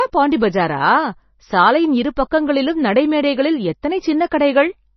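Throughout this speech the sound is watery and swirly, with a hard ceiling near 5.9 kHz and nothing above it, so sibilants lose their edge and chirp metallically. This is likely heavy MP3 compression at a low bitrate, which fits about 24 kbps.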